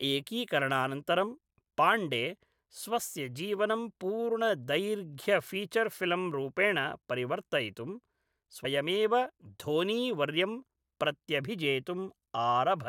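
At 8.64 s the speech jumps forward. These are compressed frames skipped: about 50 ms of audio never plays, which fits two dropped 23.2 ms frames.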